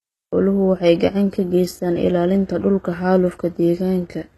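The speech was likely squeezed through HE-AAC compression at a very low rate, one that fits something around 16 kbps. The codec kept only the lower spectrum and filled the treble by copying lower bands upward under a coarse envelope. The synthetic top end sounds false, with harmonics that fail to line up across the crossover. Sibilants come out gritty and metallic from start to finish, the damage is plainly audible, and nothing remains above about 12.4 kHz.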